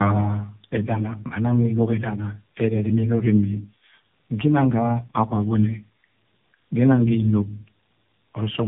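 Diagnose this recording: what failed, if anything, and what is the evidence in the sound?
What failed is at the codec stage: tandem speech coding. Across the whole clip the speech is band-limited, with nothing above 3.8 kHz, and it has a rough, muffled, warbly texture that one narrowband coder wouldn't produce on its own. The sound points to two AMR-style speech coders in a row, probably with a plain G.711 leg between them. The second coder has to re-encode artefacts the first one already baked in, so the damage stacks up.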